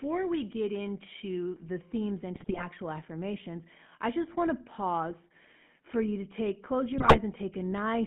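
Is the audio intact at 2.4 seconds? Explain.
No. GSM bit errors hit from 2.34 to 2.66 s, between "the themes" and "affirmations I just want." Corrupted bits reached the decoder, so the transmitted filter, pitch and gain parameters were wrong for a run of consecutive frames. Each damaged frame rebuilds the signal with a distorted spectrum or a sudden jump in level. The result is a burst of squawking, popping and gargling lasting about a third of a second.

The GSM full-rate codec also runs through this moment, as it does across the whole clip. The sound is bandlimited to roughly 200 Hz to 3.4 kHz, so everything above that is gone. The codec models the vocal tract and drives it with sparse, regularly spaced excitation pulses, and that pulse-based excitation gives the speech a plainly audible buzzy, gravelly roughness, consistent with the 13 kbps full-rate coder.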